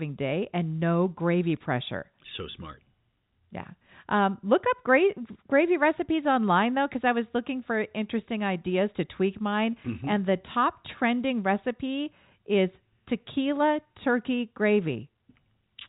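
No technical faults are audible.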